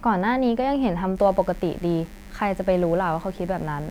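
A speech recording that picks up a steady, raspy buzz at 1.17 s and keeps it running under the talking until the end. It is mains buzz on a 50 Hz supply, sitting roughly 30 dB below the speech. The rasp comes from sharp switching spikes, such as from a dimmer, a rectifier or an unshielded run, getting into the signal twice per mains cycle. That stacks up 50 Hz harmonics reaching into the kHz range.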